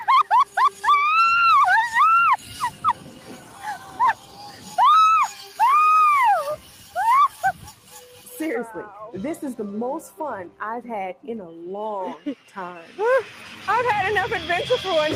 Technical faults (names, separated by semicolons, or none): noise suppressor applied to music or sounds; sound cut by the noise suppressor